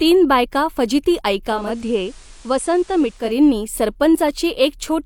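After "बायका फजिती", at 1.42 s, digital radio blends to analogue FM over 0.43 s. Hiss rises to about 30 dB below the signal, level drops about 2 dB. Digital returns at 3.41 s.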